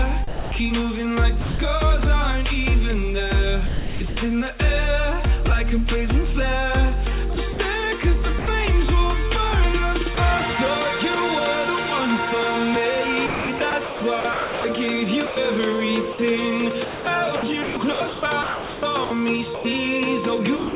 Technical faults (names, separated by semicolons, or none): sound chopped by the voice detector; sound dropped by the voice detector